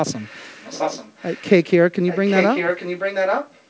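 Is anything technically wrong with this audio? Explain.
Yes, there's an echo leak. From 0.09 to 1.47 s, and again from 2.07 to 3.62 s, a copy of the speech trails about 835 ms behind, faint at first and much louder in the second stretch. It's likely a far-end speakerphone whose echo canceller let its own playback slip back into the call.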